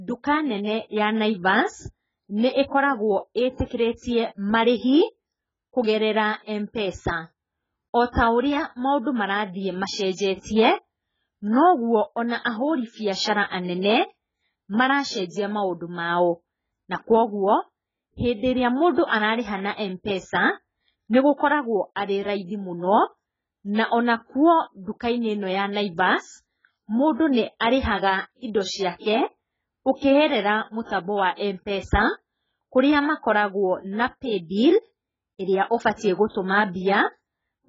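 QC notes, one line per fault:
Throughout: AAC compression. Nothing is present above 7.6 kHz, and the speech sounds dull and smeared, with a warbling, fizzy texture on sibilants and held sounds. The likely cause is an AAC-LC encode at a very low bitrate, around 12 kbps, where the encoder starves high bands and leaves gaps or noise-filled patches. Plain low-pass filtering would give a clean dull tone; the swirling, watery texture points to lossy coding instead.
21.13, 30.84–30.89, 35.97–36.01, 36.29–36.34: pre-echo. A brief hiss arrives just before a sharp onset and softens it, spreading about 16, 55, 33 and 51 ms ahead. The transform block spreads noise meant for the loud attack back into the quiet moment before it. A click or dropout would sit on or after the attack; this noise comes first and fades into it.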